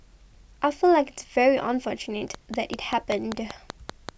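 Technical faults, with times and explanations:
2.35 to 4.10 s, train of clicks: a run of about ten sharp clicks sits on top of the speech at a steady 5.2 per second, each one with much the same shape and poking up roughly 10 dB above the signal, so they tick away clearly both over the talking and in the gaps between it. That even, mechanical spacing is what gives it away, and the likely source is a repeating pulse from nearby interference or a faulty connection or power supply.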